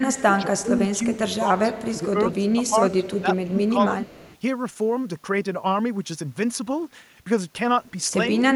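From the start to 3.97 s, speech is suppressed in double talk, likely because the echo canceller could not tell this talker from the far side's loudspeaker echo. It turns the voice down by up to about 15 dB, in dips and broken patches totalling about two seconds. Overlapping this, echo leaks because the far end's canceller likely missed part of its loudspeaker pickup. Faint copies return about 221 ms late, at about 25 to 30 dB below the speech, at 0.17, 0.97 to 1.17, 1.75, 2.33, 3.64 and 4.02 to 4.38 s.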